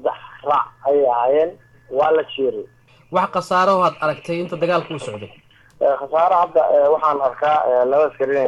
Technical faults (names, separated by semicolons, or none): none